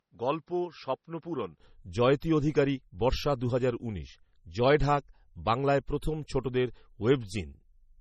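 From the start to 1.60 s the speech sounds dull and boxy, with nothing above 6.4 kHz, a level about 5 dB lower, and a faint noise floor of its own roughly 55 dB below the signal. This is an input switched to a poorer device, likely a second microphone or a headset call profile with a narrower band. At 1.60 s the wider-band sound returns with no silence at the switch.

Throughout the clip nothing is present above 15.6 kHz, a hard ceiling that the later high-rate file cannot lift. This is low-bitrate audio saved at a high bitrate: the cut-off fits a first MP3 encoding at a low rate, around 32 kbit/s, likely followed by a second MP3 pass at about 195 kbit/s. The second encoding adds size but nothing audible, and cannot restore the band the first pass removed.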